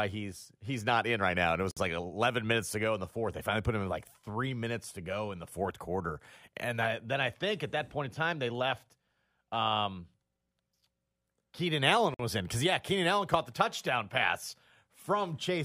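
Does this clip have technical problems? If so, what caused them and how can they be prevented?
Yes. The speech has two gaps at joins of encoded pieces: 1.71 to 1.77 s (56 ms), and 12.14 to 12.19 s (51 ms), just before "was in because yeah". Each piece was encoded separately. The encoder's start delay and end padding were left in, so a short gap of silence opens, its edges smeared by the codec. To prevent this, encode the whole recording in one pass, or trim each piece's encoder delay and padding before joining.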